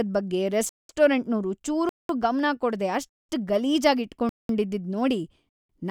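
Gaps between chunks cut the speech at 0.69, 1.89, 3.09, 4.29 and 5.49 s. Each is a 0.2 s silence inserted between 1 s chunks. No speech is lost.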